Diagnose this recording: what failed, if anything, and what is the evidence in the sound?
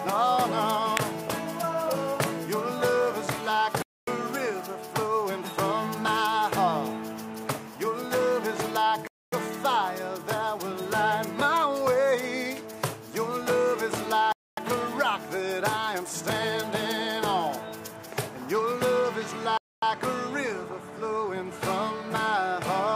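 The fault is a gap between chunks, from storage or playback: 250 ms silences at 3.82, 9.07, 14.32 and 19.57 s, one after every 5 s chunk, with no sound lost. A spectrogram shows sharp-edged, full-band blank columns; the waveform drops flat.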